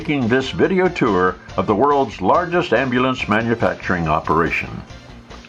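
From 4.15 s to the end, sample clock jitter sets in. The converter's clock wanders by around a microsecond, so each sample is taken slightly off time, with errors largest where the waveform moves fastest. This adds a faint hiss, roughly 40 dB below the signal, that thickens on loud, bright passages and drops away in quiet moments.

At 4.88 to 4.90 s, lost LE Audio frames leave a 20 ms hole, which fits two 10 ms LC3 frames. The decoder fills it by reusing the last spectrum with scrambled phase, so the sound briefly turns into a noisy, smeared blur before clean playback resumes, still carrying the jitter hiss and the light codec coarseness.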